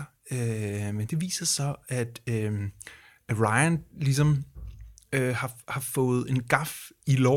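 No technical faults can be heard anywhere in the recording.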